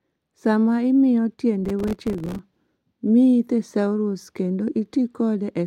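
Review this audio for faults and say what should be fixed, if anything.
From 1.65 to 2.39 s the speech carries processor overload crackle: dozens of buffers of roughly 3 ms each miss their deadline and drop to silence. Unlike a single dropout, it is a dense gritty tearing that stops once the load eases. Enlarge the buffer or reduce processing load.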